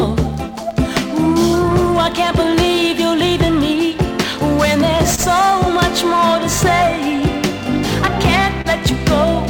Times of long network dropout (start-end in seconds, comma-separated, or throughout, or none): none